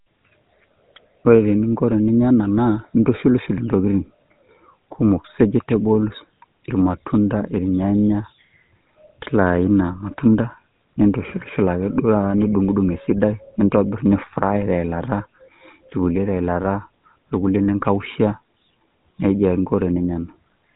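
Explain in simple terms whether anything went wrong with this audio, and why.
The speech has been through the GSM full-rate codec, the old mobile-phone voice coder, from start to finish. Instead of storing the sound itself, the codec builds a rough model of the throat and mouth and drives it with a thin train of pulses. That shortcut is what gives the voice its clearly audible buzzy, gravelly grain. Nothing above about 3.8 kHz gets through, so it also sounds muffled. A plain phone-line filter would sound muffled in the same way but would stay smooth, without that rasp.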